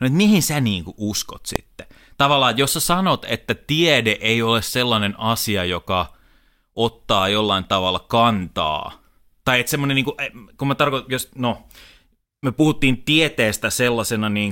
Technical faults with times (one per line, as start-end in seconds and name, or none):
1.56 invalid numbers at full scale